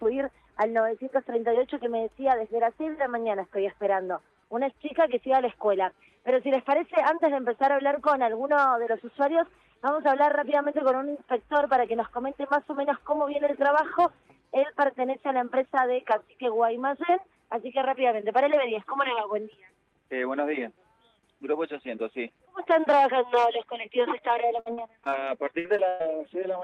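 From 24.53 s to 26.03 s the sound turns choppy and robotic, with pieces dropping out. This is repeated packet loss: holes up to 114 ms keep arriving, each patched by extending the preceding sound, so roughly a fifth of a second is rebuilt.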